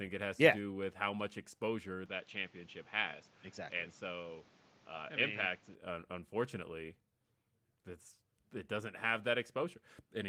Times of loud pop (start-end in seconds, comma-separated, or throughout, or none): none